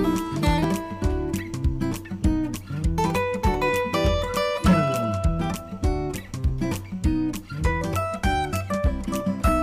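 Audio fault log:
No faults heard anywhere in this recording.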